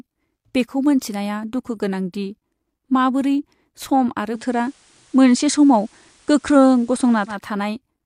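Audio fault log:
4.31 to 7.38 s, digital radio blending to analogue: the receiver lost its digital stream and cross-faded over about 124 ms to the station's FM feed, so hiss rises to roughly 35 dB below the speech and the level shifts by about 3 dB.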